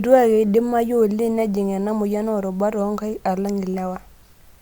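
No technical faults are audible.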